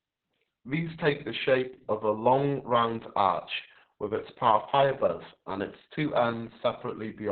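Heavy Opus voice compression throughout leaves the speech muffled, hoarse and robotic, which fits a bitrate near 6 kbps; spectrograms show nothing above 4 kHz.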